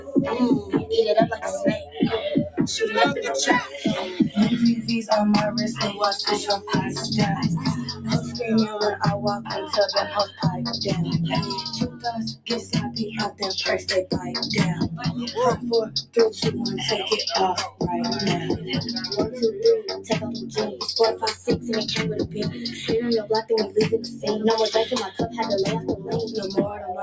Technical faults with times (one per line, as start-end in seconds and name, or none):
0.00-27.02 noise suppressor applied to music or sounds
0.00-2.58 sound cut by the noise suppressor
7.90-8.31 sound cut by the noise suppressor
9.39-10.42 sound cut by the noise suppressor
11.85-14.28 sound cut by the noise suppressor
15.86-16.16 sound cut by the noise suppressor
17.70-22.80 sound cut by the noise suppressor
23.95-26.08 sound cut by the noise suppressor